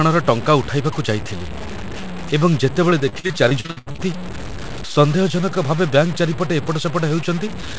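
From start to end, a gritty, grainy distortion follows the speech, only about 15 dB below it. Likely cause: low bit depth without dither, fitting truncation to about 5 bits.

From 2.90 to 4.00 s, repeated packet loss makes the sound choppy and robotic. About a third is patched by repeating sound, with holes up to 78 ms.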